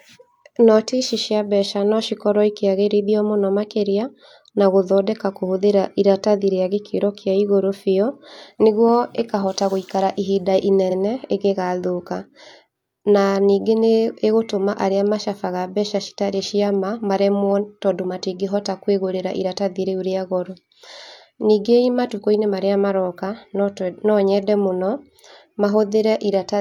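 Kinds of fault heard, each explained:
repeated frames: after "nĩguo ĩkahota gũikara ihinda", a 46.4 ms block of speech plays twice, a stutter adding time, unlike a dropout, which removes sound.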